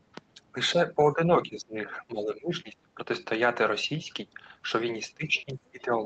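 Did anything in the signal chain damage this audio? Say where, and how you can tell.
Yes. From 0.96 to 2.97 s, and again from 5.07 s to the end, the speech level drops in patches, by about 20 dB and then about 15 dB, for roughly a second and a half in the first stretch. This is likely speech suppressed in double talk: the call processing's echo canceller mistook the talker for echo and attenuated both.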